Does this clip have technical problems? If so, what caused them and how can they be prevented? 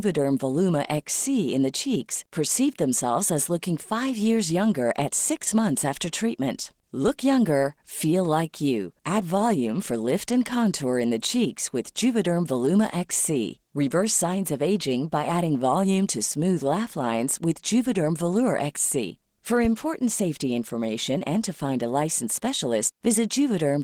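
Yes. Throughout, the speech sounds hoarse and slightly robotic, from Opus voice compression in hybrid mode coding the excitation coarsely, which fits a bitrate near 16 kbps. To prevent it, encode at a higher Opus bitrate.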